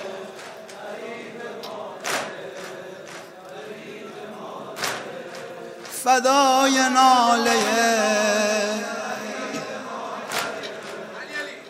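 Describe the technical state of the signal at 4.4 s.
At 4.4 s the signal is intact, with no dropout, clipping, glitch or other technical fault audible at that point.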